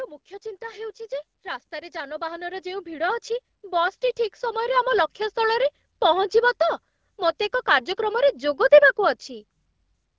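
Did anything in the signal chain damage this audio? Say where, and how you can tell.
Yes. Automatic gain rising in the call processing: from 1.69 s, after "ମୁଖ୍ୟ ଚିନ୍ତା ହେଉଛି ଯେ", speech and background swell together by about 13 dB until 5.19 s, before "ସ୍ଥଳରେ ପହଞ୍ଚିବ ତ ମୋତେ", as the AGC slowly raises its gain on a quiet input.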